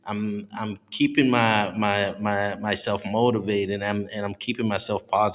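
Nothing stood out on listening to this speech recording; no technical problem could be heard at any point.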